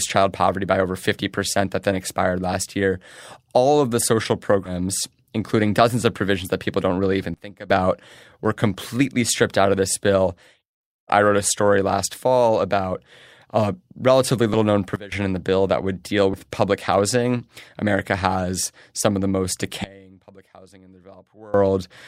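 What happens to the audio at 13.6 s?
Nothing goes wrong at 13.6 s: the speech continues cleanly through that moment, with no dropout, click, distortion or other technical fault.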